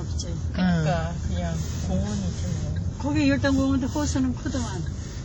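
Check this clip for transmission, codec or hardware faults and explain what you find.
One codec fault runs through the whole clip. Ringing, washy audio with breathing hiss and nothing above 19 kHz is likely WMA compression, whose long transform blocks smear coarse quantisation noise, consistent with heavy damage at about 32 kbps.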